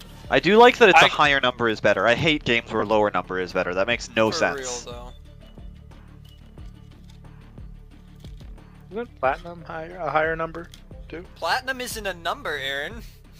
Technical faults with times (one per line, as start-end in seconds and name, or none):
2.80-2.83 lost LE Audio frames